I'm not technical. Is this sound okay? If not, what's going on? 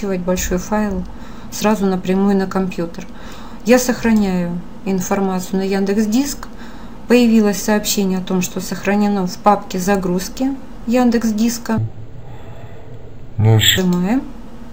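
No. From 11.78 to 13.78 seconds there's a stereo read as mono fault: the system took the two interleaved left and right channels as one. That stretches the audio to half speed and drops it a full octave, so it drags low and slow.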